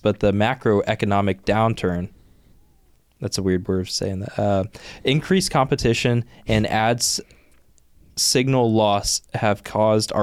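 No technical faults can be heard in the speech at any point; the signal stays continuous and intact throughout.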